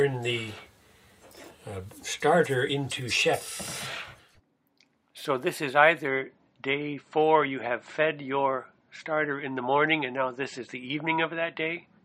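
At 6.08 s the stream drops to a lower bitrate until the end. Treble vanishes above 8.3 kHz, artefacts rise, fitting a fall toward 32 kbit/s MP3.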